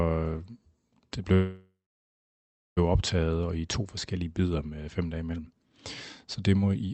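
A speech recording, band-limited at about 8 kHz as a wideband call codec such as Opus would leave it, contains a call audio freeze from 1.33 s to 2.79 s. The last sound is drawn out into a fading buzz or hiss, then about 1.04 s of silence follows before speech resumes exactly where it stopped. Nothing is lost, but 1.43 s of delay is inserted. The likely cause is packets held up in transit, leaving the jitter buffer empty. On a spectrogram this appears as smeared horizontal bands decaying into a blank column, and on the waveform as a tapering envelope that flattens to a line.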